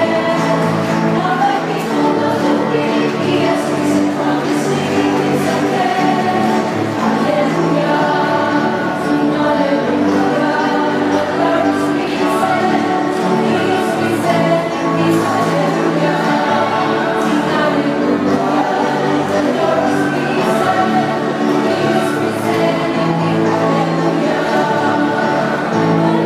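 The resampler restarted on every block, converting each 10 ms chunk in isolation, likely a 48 kHz to 44.1 kHz conversion, so every block edge carries a small discontinuity. Throughout the audio this produces a steady 100 Hz buzz that rides on the signal and vanishes in silence.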